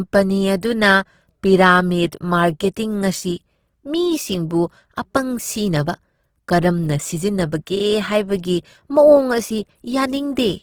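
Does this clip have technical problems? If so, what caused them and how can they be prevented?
Yes. Opus compression damage runs through the whole speech clip, and it is plainly audible. The tone is grainy, rough and noisy rather than swirly. The top end still reaches about 20.3 kHz, so the band is kept wide. The sound points to the codec's music mode at a very low rate, which fits roughly 16 kbps. The likely cause is that the encoder kept each band's energy but filled starved bands with folded or noise content. To prevent it, encode speech at a higher Opus bitrate.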